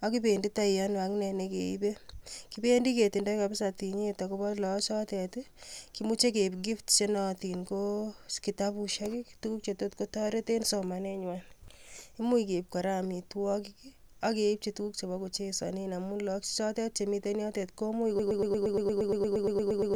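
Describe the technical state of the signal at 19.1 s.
At 19.1 s the speech is caught in a broken-record loop running from 18.19 s to the end: a 0.12 s fragment repeats 15 times, likely from a stalled stream or player. It sounds like a rapid stutter, and the waveform and spectrogram show identical blocks tiling every 0.12 s.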